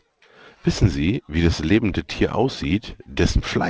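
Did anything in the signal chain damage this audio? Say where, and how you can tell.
No, nothing in the signal chain damaged this speech.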